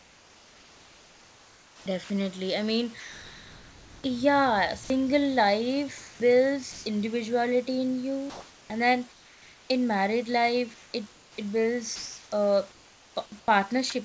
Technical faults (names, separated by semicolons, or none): sound chopped by the voice detector; comfort noise in place of the background; sound dropped by the voice detector